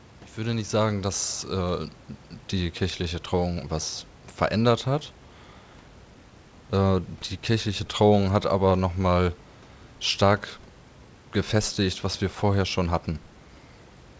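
Nothing is technically wrong with this speech clip, which carries faint room noise well below the speech and has no content above 8 kHz, as fits a G.722 call path.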